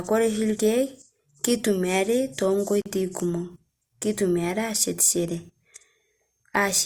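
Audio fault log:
2.82–2.86 s, gap at a join of encoded pieces: a 41 ms hole before "kumok kitumiare ashetishore", where encoder start delay and end padding weren't trimmed between chunks.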